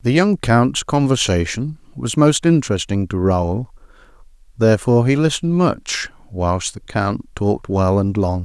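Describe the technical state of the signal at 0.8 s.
At 0.8 s the speech signal is intact, with no audible fault at that moment.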